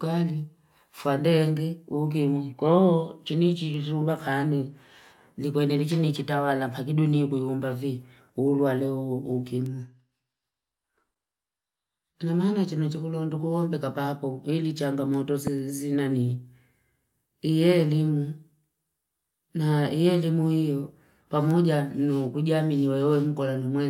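At 15.47 to 15.50 s, a single loud pop jumps about 10 dB above the speech. It is likely a voltage spike, perhaps static or a switch. The speech continues underneath.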